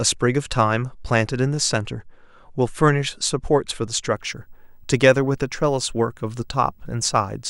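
A screen or video cable couples into the audio path from 4.15 s to the end, adding a faint video or display buzz at 50 Hz, with hash above it and a thin 15.6 kHz line tone.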